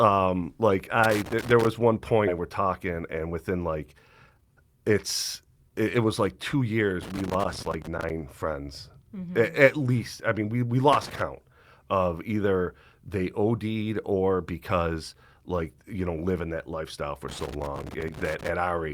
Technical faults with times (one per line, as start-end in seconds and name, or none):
1.04-1.67 loose connector crackle
2.27-2.29 skip ahead
2.39-4.90 jitter buffer speed-up
5.45-6.06 jitter buffer speed-up
6.54-6.89 jitter buffer speed-up
7.02-8.10 loose connector crackle
10.93-11.22 loose connector crackle
17.29-18.49 loose connector crackle